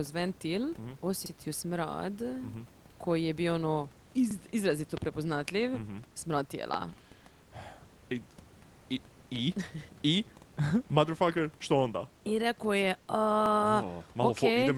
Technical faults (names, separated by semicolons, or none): overlapping chunks; loud pop